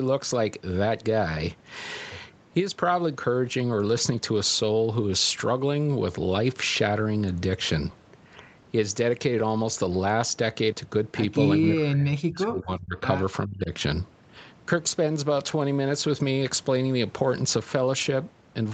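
From 11.56 to 13.02 s, and again briefly from 13.45 to 13.71 s, the speech drops sharply, by roughly 40 dB and then about 25 dB, likely speech suppressed in double talk by an echo canceller. The waveform shows the envelope collapsing; the spectrogram goes nearly blank.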